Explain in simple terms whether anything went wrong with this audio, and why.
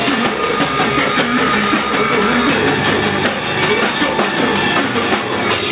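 Throughout the clip the level breathes: loud and soft parts end up closer in level, leaving everything squashed. That is gain pumping, likely from gain set far too high, with a fast limiter yanking it down repeatedly.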